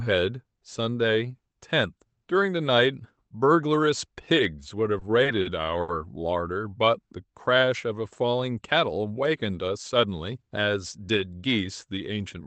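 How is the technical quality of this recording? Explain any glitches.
The recording has two timing glitches, both from the jitter buffer in a call path. The audio comes through a speech codec with a cut-off near 8 kHz, consistent with Opus at a modest bitrate.

From 4.99 to 5.90 s there are repeated stalls (stutter). Packets reached the receiver late or more slowly than they were played, so its jitter buffer ran dry four times. At each gap the receiver extended the last sound until fresh data arrived, filling about 150 ms in total, with the longest hold 70 ms. Nothing was dropped, but about 16% of that stretch is concealment, heard as a dragging, catching stutter.

From 6.85 to 7.66 s there is a jitter buffer slow-down. The buffer's reserve was low, or its target delay had just gone up, so the receiver repeated single pitch periods and slivers of pause to rebuild it. This stretched the passage by 54 ms, to 94% speed at unchanged pitch. 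The sounds are slightly drawn out, and there may be a faint warble where the cycles repeat.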